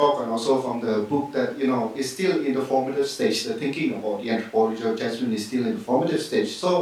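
No technical faults can be heard anywhere in the speech; the signal stays continuous and stable throughout.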